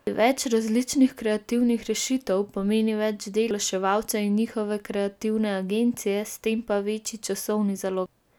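Damaged data in the compressed stream corrupts frames at 0.07, 3.51 and 8.06 s, so the decoder misreads them, loses sync and hunts for the next valid frame header. Each instant comes through as a brief chirp, squawk, click or short hole.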